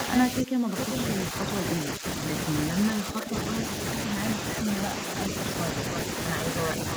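From 0.42 to 0.77 s the speech drops sharply, by roughly 20 dB at its deepest. This is speech suppressed in double talk. The likely cause is an echo canceller that could not tell the talker from loudspeaker echo while both sides spoke, so it turned everything down. The voice sinks and partly vanishes for almost half a second.

From 0.81 to 1.04 s a delayed copy of the voice comes back, about 405 ms late and only slightly quieter than the speech. This is an echo leak. The far end is likely on a loudspeaker, and its canceller let some of the pickup through. It sounds like a repeat trailing the talker.

Shorter, milder dips follow at 1.86 to 2.04 s, 3.04 to 3.34 s and 5.06 to 5.13 s. Each is a shallow drop of a few decibels. Again, double-talk suppression is the likely cause. The voice briefly thins or softens.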